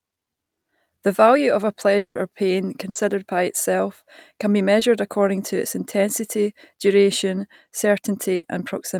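From 1.97 to 2.17 s, between "value of a" and "or pain", the last sound stretches into a fading buzz or hiss before going silent. About 180 ms is lost, likely a long network dropout. A burst of packet loss at 2.89–2.97 s, after "or pain", cuts about 60 ms; the concealment holds and fades the preceding sound before resuming further on. At 4.79–4.83 s, after "by itself can be", short concealed packet loss leaves a brief smear where about 20 ms was synthesised from the prior sound. A second burst of packet loss at 8.35–8.45 s drops about 80 ms, heard as a fading held sound and a jump forward.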